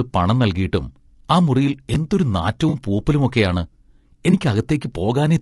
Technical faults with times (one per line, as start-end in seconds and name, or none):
0.00-5.41 low-delay AAC compression
1.94-1.96 chunks out of order
2.69-2.74 AAC frame loss with concealment
4.31-4.34 AAC frame loss with concealment